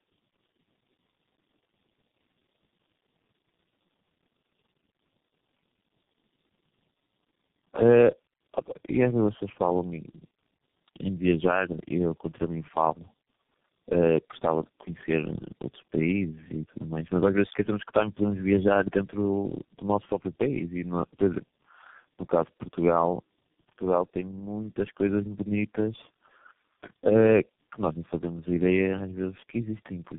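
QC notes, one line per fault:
Throughout: tandem speech coding. The speech has passed through three low-rate speech coders in sequence, each one re-encoding the already degraded output of the one before. The result is a rough, muffled, warbling quality worse than any single coder would produce, consistent with a chain such as AMR-NB, G.729A and finally G.723.1 with plain telephone-law links between them. Nothing remains above 3.6 kHz, which takes away the brightness and sharpens the dull, boxy character.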